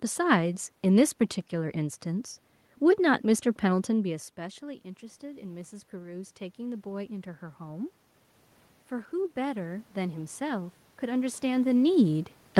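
From 4.1 to 7.95 s, automatic gain rising lifts the level by about 6 dB after the input falls about 17 dB as the talker moves away. Voice and room noise swell together. It rises again, by about 4 dB, from 9.1 to 11.49 s.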